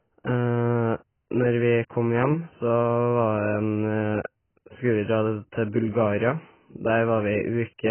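AAC compression throughout: the speech stops dead above 3.1 kHz and sounds dull, warbling and smeared, likely from AAC-LC starved near 12 kbps and quantising its spectrum coarsely.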